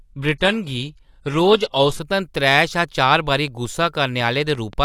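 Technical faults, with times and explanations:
0.0–2.0 s, adaptive stream starting at a low bitrate: the player opened on a cheap rendition of the stream so playback could begin at once, then switched to a better one after gauging the connection. Until the switch the speech has no content above 12.3 kHz, the treble sounds synthetic, and coding artefacts are heavier, which fits a parametric low-rate codec at around 16 kbit/s. Quality jumps abruptly, without a gap, just before "त्रै शा चार बारी".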